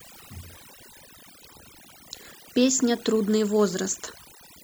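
Overdone noise removal runs through the whole of this speech recording. A noise reduction stage set far too aggressively is cutting individual frequency bands down to nothing whenever their level sits close to its noise estimate, and the softer parts of the voice get swept out along with the noise. The gaps between phrases collapse into near silence scattered with twinkling specks.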